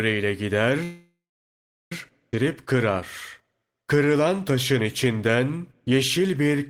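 Call audio freeze, 0.83 to 1.92 s: the speech stops and, for about 1.1 s, the last sound is carried on as a fading buzz that falls into silence for roughly 0.76 s of that stretch. When the speech returns, it picks up where it left off, with nothing lost. The pause was inserted into the speech rather than cut out of it. The likely cause is packets held up in transit, so the jitter buffer ran dry and the receiver had to fill the wait.

Skip ahead, 2.31 to 2.34 s: playback jumps forward with almost no audible gap. Roughly 0.7 s of speech is gone, and the material on either side is joined nearly directly. A stretch was dropped while later audio was already queued, either lost on the way or discarded by an overflowing jitter buffer. This also removes about 0.7 s of the delay the freeze had just added.

Jitter buffer slow-down, 2.43 to 2.93 s and 3.42 to 6.68 s: the buffer was rebuilding its reserve by repeating single pitch periods and small pieces of pauses. 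Pitch stays the same, but the speech runs slower, at about 94% speed in the first stretch (40 ms added). The second stretch is slower still, at about 90% (321 ms added), with drawn-out sounds.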